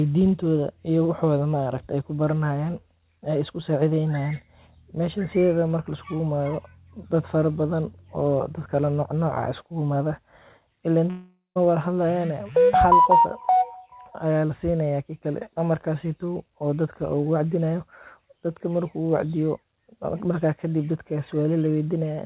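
At 11.1 s the speech breaks off in a long network dropout lasting until about 11.58 s. The final sound is drawn out into a buzz or hiss that fades over roughly 0.45 s, then about 150 ms of silence follows, and the speech resumes with around 460 ms missing. This was likely caused by audio packets never arriving. A brief packet-loss glitch leaves only a click or smear, but here a whole stretch is gone. The band stops at 4 kHz, consistent with G.711 telephone coding.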